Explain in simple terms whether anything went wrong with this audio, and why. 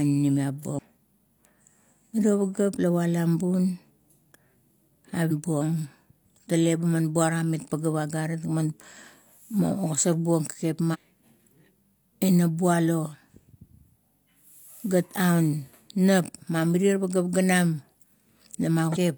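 Damaged data in a compressed stream, at 0.75, 5.27, 10.90 and 18.92 s: corrupted bytes made the decoder misread frames, causing brief glitches.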